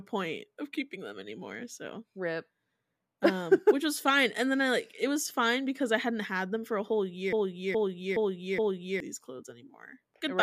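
A broken-record loop runs from 7.33 to 9.00 s in this speech recording, starting right after "them for a whole". A fragment about 0.42 s long plays four times back to back, each pass identical, so the speech stalls into a stutter and whatever should have followed in those seconds never arrives. The likely cause is a player, encoder or stream that stalled and kept resending the last piece it held.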